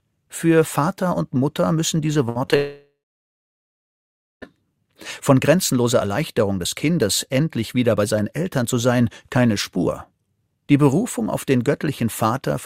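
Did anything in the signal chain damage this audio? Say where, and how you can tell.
Yes. The network repeatedly lost packets between 2.13 and 2.54 s. Four gaps, the longest 66 ms, were filled by repeating sound, which makes it choppy.

Then, from 2.56 to 4.44 s, the last sound smears into a fading buzz, followed by about 1.5 s of silence, likely a long network dropout.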